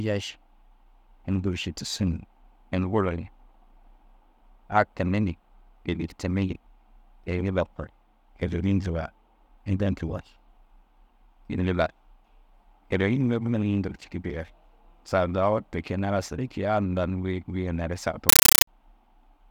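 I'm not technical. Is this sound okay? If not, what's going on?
No. From 18.29 to 18.67 s, near the end, the speech gives way to a very loud, harsh, chattering static. This is a compressed stream played as audio: a Dolby Digital stream reached the speakers without being decoded, so the player treated packed data as sound. Unlike random crackle or distortion, this static has a steady rhythm. About 31 short bursts a second, each roughly 9 ms long, alternate with brief silent gaps.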